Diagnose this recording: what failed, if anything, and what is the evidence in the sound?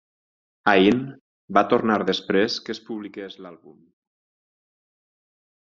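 A gain stage at the buffer level stepped the level down without smoothing, in 1 dB increments at around 30 steps per second. From 2.32 to 3.32 s, just after "va tornar", the speech drops by about 20 dB, with zipper noise ticking along the fade.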